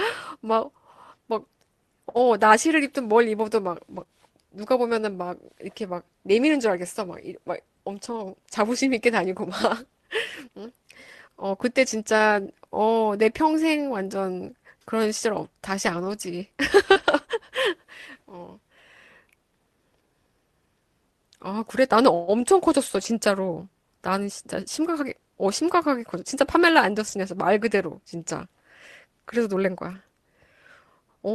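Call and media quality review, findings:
Lost packet rebuilt from error correction: rough, noisy patches at 3.95–4.01, 16.95–17.09, 22.85–23.07, 27.07–27.13 and 29.91–29.97 s. Jitter buffer/Opus decoder playing low-bitrate in-band FEC copies. No gap. Spectrogram shows grainy, blurred frames.

Short concealed packet loss: brief smear or wobble at 4.03–4.07 s and 16.92–16.97 s. Decoder PLC extended the last sound, then crossfaded back.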